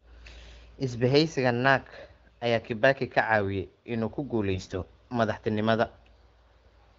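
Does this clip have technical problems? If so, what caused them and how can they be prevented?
Yes, AMR bit errors hit from 4.54 to 4.80 s, right after "inuu ku". The sound keeps its pitch and level but goes scratchy and gargly, which fits roughly one bit in ten flipping in the weakly protected parts of about a dozen frames, scrambling pulse positions and fine gain values. A stronger radio link or better channel coding would prevent it.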